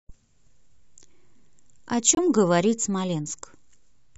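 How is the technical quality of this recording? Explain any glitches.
There's one real glitch in this speech recording, a short dropout just past the two-second mark.

From 2.15 to 2.19 s there's a corrupt frame muted. A chunk of the compressed stream got damaged bits, the decoder rejected it, and the player filled the gap with silence. You hear the sound cut out abruptly for about 40 ms, which fits a single lost frame, then carry on right on time with nothing shifted or stretched.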